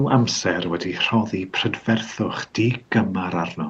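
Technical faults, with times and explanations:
Nothing goes wrong technically in this bit of speech; the call codec's band-limited sound and a faint room noise well below the speech are just how it normally sounds.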